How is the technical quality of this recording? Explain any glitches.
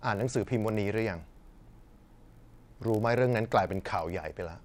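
Not great: there's a block size mismatch (padded) running through the whole speech recording, from start to finish. One stage is handing over blocks a touch shorter than the next stage reads, and the leftover space gets filled with zeros. Those little gaps come round at about 46.9 Hz, which fits a 1024-sample read block, so you hear a low buzz under the speech. The speed change is tiny, 0.999 times normal, with pitch essentially unchanged.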